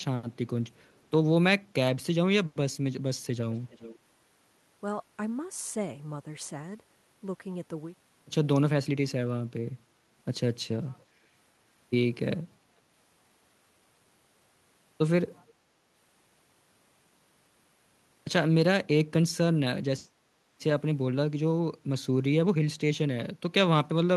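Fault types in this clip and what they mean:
Echo leak: A delayed copy of the speech comes back three times, at 0.85 to 1.06 s, 3.52 to 3.97 s and 15.47 to 15.53 s. The delays are 373, 401 and 441 ms. The copy is very faint in the first, plainly audible in the second, and faint in the brief last scrap. The likely cause is a far-end loudspeaker whose echo canceller failed to remove everything its microphone picked up and sent it back.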